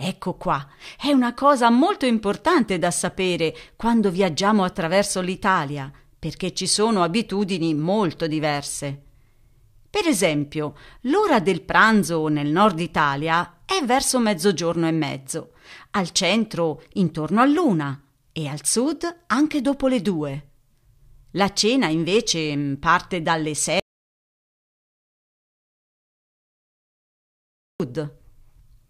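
A speech clip with an audio dropout to silence from 23.80 to 27.80 s, about 4.0 s of silence, likely from a lost input or mute. Unlike a natural pause, no room tone survives, and the speech cuts off and resumes abruptly.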